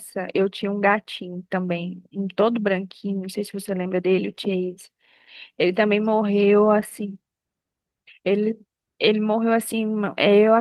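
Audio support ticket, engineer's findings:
Engineer's findings: no audio fault found in this speech clip.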